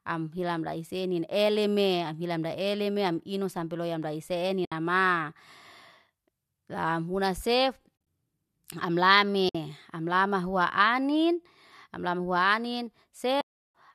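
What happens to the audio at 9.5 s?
At 9.49 s the decoder lost a short run of AAC frames and, having nothing to play, muted them by setting their spectrum to zero. This is AAC frame loss with muting, lasting until 9.55 s. The speech fades out and back in across the overlapping windows instead of cutting off, leaving a soft-edged gap of roughly 60 ms, which fits a handful of short low-delay frames, likely AAC-ELD, going missing together.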